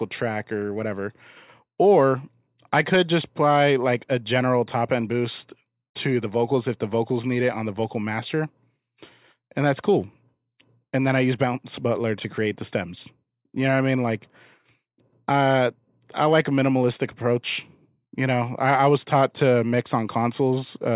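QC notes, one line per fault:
No faults found; nothing to log.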